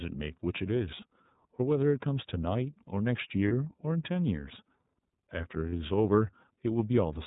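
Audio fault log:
throughout iLBC codec: narrowband coding cuts everything above 4 kHz, and independently coded 30 ms frames leave speech plainly rough and synthetic, which fits the 13.33 kbps mode.
3.48–3.52 s and 5.69–5.73 s lost iLBC frames: two 30 ms gaps filled by a repeated pitch cycle mixed with noise, heard as a brief buzzy held vowel that recovers immediately.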